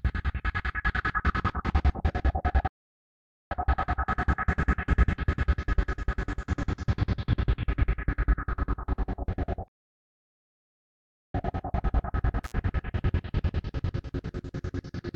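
A recording of sounds with two playback stalls and one intermittent contact dropout. The first stall silences the output from 2.67 to 3.51 s, about 0.83 s, and the second from 9.68 to 11.34 s, about 1.66 s. Both are most likely caused by the player running out of buffered data or its thread being blocked. At 12.44 to 12.52 s an intermittent contact briefly opens the signal path for about 53 ms, cutting the sound with crackle at each edge and leaving faint hiss during the break, consistent with a loose cable or plug.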